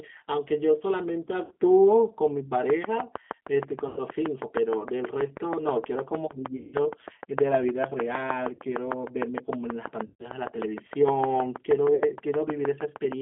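Speech squeezed through a G.729 codec at 8 kbit/s: the band stops around 3.5 kHz and the voice has that rough, slightly synthetic edge. There are six spots of VoIP packet loss concealed by the speech codec, at 1.45, 3.89, 6.57, 8.55, 10.06 and 11.95 s, covering 40 to 160 ms. The decoder smears the last sound into a fading buzz or coloured noise there. From 2.7 s to the end there's a regular train of clicks, around six a second and well above the speech, likely interference from nearby equipment.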